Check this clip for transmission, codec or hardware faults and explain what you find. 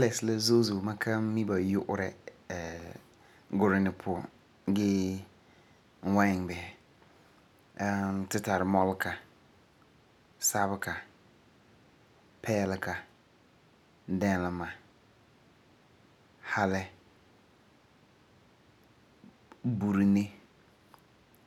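Nothing to report: no audible fault anywhere in the speech.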